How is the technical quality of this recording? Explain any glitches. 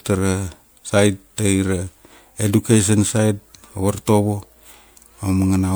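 The speech is degraded throughout by generation loss. The likely cause is repeated MP3 encoding, perhaps four passes at 128 kbit/s, each requantising on a shifted frame grid, leaving swirly, hollow sound, blurred attacks, and nothing above 21 kHz.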